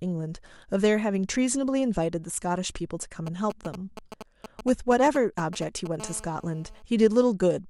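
From 3.27 to 5.87 s you get GSM signalling bursts: a 2G handset close by is firing off short clusters of radio pulses, the kind it sends while setting up or checking in, and something in the audio chain is rectifying them. What comes through is that galloping dit-dit-dit of ticks and brief buzzes at a 217 Hz burst rate, sitting fairly loud, not far under the speech.

Then from 6.00 to 6.82 s it switches to full GSM phone buzz, with the same phone now transmitting continuously as in a call, its bursts still arriving 217 times a second and still getting rectified into the audio. It's a hard, raspy, harmonic-rich buzz at 217 Hz with no connection to the speech, steady across that stretch and quieter than the earlier bursts, at about 21 dB below the speech.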